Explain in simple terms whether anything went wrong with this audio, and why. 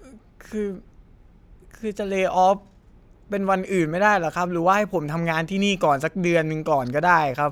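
Nothing went wrong with this speech recording. At no point does the audio misbehave in a way that would point to a technical problem.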